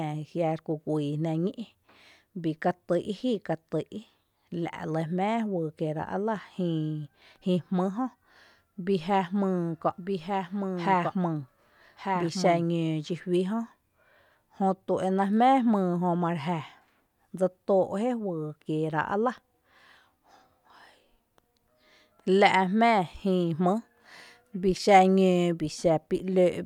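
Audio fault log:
9.98–12.64 s, doubled audio track: a full-band copy of the speech trails about one second behind, roughly 5 dB quieter, dry and abruptly switched, likely from a slower second capture path. A spectrogram repeats each pattern a second later; the waveform shows smaller, hard-edged overlapping envelopes.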